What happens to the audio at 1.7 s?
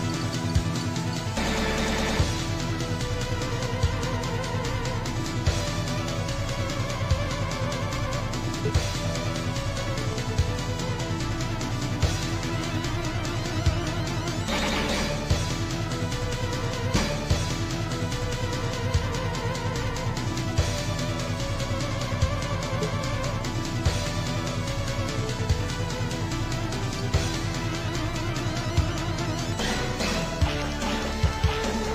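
Nothing goes wrong at 1.7 s; the audio plays through that moment intact, with no dropout, click or distortion to be heard.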